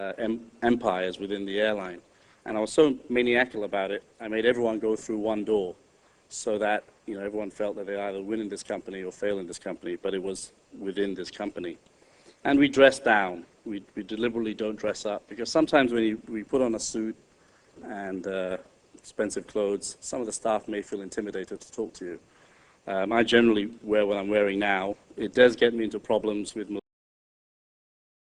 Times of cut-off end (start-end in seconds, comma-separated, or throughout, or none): 26.79-28.32